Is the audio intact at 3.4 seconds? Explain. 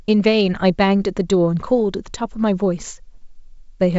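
Yes, at 3.4 seconds the audio is intact, with the speech carried cleanly through G.722 wideband telephone coding at 64 kbit/s.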